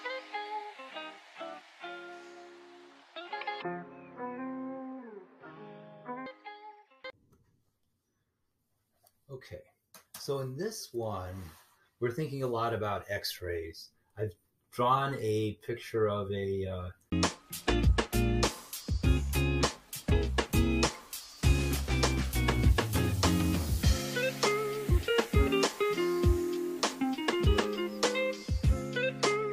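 Between 3.62 and 6.26 s, audio plays at half speed, an octave low: stereo read as mono, interleaved left-right samples decoded as one channel.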